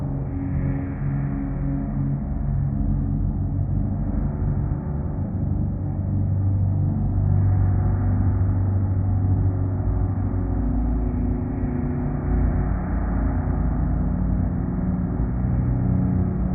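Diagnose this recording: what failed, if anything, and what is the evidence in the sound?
Nothing in the recording points to a failure at any stage of the chain. No dropout, distortion, timing error or other fault can be heard anywhere in the sound.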